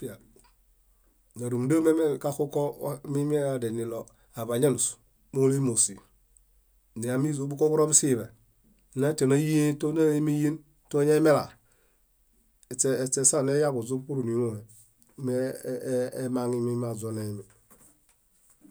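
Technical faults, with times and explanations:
No technical faults can be heard in this speech clip.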